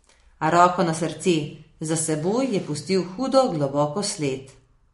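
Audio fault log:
Throughout: MP3 compression. Nothing is heard above 11.2 kHz. The damage is plainly audible. Speech sounds watery and swirly. The cause is likely a starved MP3 encoder, consistent with about 48 kbps. It cuts the treble and toggles weak frequency lines between frames.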